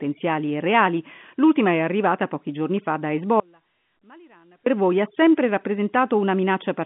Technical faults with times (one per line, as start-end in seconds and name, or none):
3.40-4.66 audio dropout to a faint residue